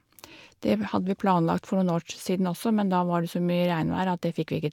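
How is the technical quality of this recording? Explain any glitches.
No audible glitches or defects anywhere in the recording, so there is nothing to explain.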